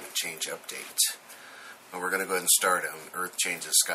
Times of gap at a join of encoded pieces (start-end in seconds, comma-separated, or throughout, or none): none